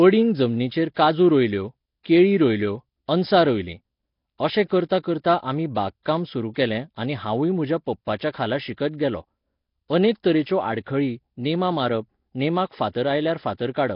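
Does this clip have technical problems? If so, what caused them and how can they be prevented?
Yes. Throughout the speech there is a rough, hissy halo and a smeared, underwater quality, with nothing above 5.3 kHz. This is likely Nellymoser compression: the codec spends a fixed, small bit budget on each short block, so weak frequency bands get no bits and are refilled with noise, producing the hiss and smear. The damage is heavy, which fits a low bitrate of around 22 kbps. To prevent this, record or transcode with a modern codec such as Opus or AAC at a higher bitrate.

A pre-echo occurs at 5.75 s, between "अशें करतां करतां आमी" and "बाग काम सुरू केलें". A short hiss of about 14 ms comes just before a sharp attack, which sounds softened. The transform codec spreads its quantisation noise across the whole block, so noise sized for the loud onset also fills the quiet moment before it. To prevent this, use a codec with block switching to short windows, or a higher bitrate.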